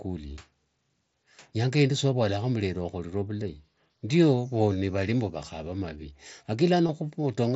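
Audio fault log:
6.87 to 6.89 s, concealed Bluetooth headset packet loss: about 22.5 ms of the speech drops out of the link between headset and phone, which fits roughly three lost frames. The receiver fills the hole by repeating the closest-matching slice of the waveform just before it, so instead of a click or silence there is a brief buzzy, held sound at full level, then a slight warble as real audio resumes over the band-limited mSBC path.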